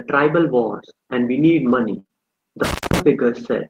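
Just after "wars and we need", at 1.99 s, a burst of packet loss begins and runs to 2.12 s. Several consecutive packets failed to arrive in time, so the receiver extended the last sound for about 51 ms, letting it decay into a held, fading tail. About 60 ms of the original audio never reappears, and playback picks up further along, so the stretch between is skipped rather than delayed.

Overlapping that stretch, from 2.07 to 2.11 s, there is a short concealed packet loss. Roughly 20 ms of audio was missing at the decoder and was replaced by about 25 ms of synthesised continuation before blending back into the received signal. Heard on its own terms it is a brief smear or wobble layered into the tail of the larger gap.

From 2.64 to 3.00 s there is an intermittent contact, the signature of a loose plug or cable momentarily breaking the connection. The line drops out for about 225 ms in total within that span, with crackle where the contact opens and closes. 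While it is open, the signal collapses to faint hiss instead of the speech, then returns abruptly as the connection is re-established.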